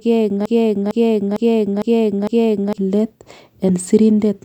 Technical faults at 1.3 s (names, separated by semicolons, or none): broken-record loop